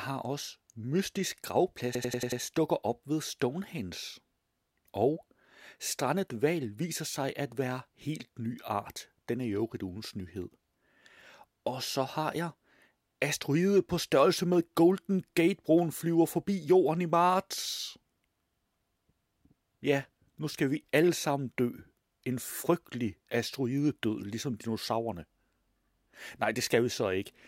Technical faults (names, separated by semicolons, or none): system hang loop